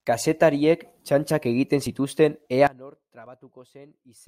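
At 2.67 s, right after "txantxak egiten zituzten", the speech collapses by about 23 dB and stays faint to the end of the clip. This is likely one channel inverted: with one side's polarity reversed, the content shared by both channels cancels on a mono sum, so the centred speech and the background nearly vanish. A plain gain drop or fade would lower everything evenly. Here only the residue of the channel difference survives.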